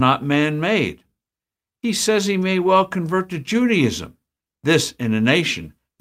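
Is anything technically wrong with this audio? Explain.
Yes. Clock drift between sender and receiver runs throughout. The sender's clock is about four percent slow, so the receiver's buffer keeps draining.

Repeated timing corrections occur from 0.38 to 5.81 s. The receiver repeats short pieces to fill the gap, adding roughly a fifth of a second. This sounds like small hiccups and a slightly slowed, unsteady tempo at 96% speed.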